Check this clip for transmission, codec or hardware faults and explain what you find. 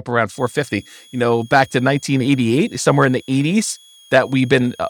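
A switching supply whistle runs from 0.31 s to the end of the speech at 4.90 s. A high, faint tone drifts between 3.27 and 3.36 kHz, well below the speech, as a power supply's switching falls into the audible range. Unlike a fixed interference tone, its pitch wanders slightly.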